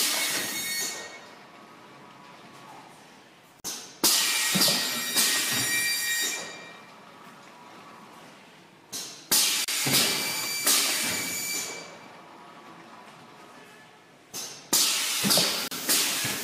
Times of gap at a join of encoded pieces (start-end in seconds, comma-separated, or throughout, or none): 3.60-3.64, 9.64-9.68, 15.68-15.71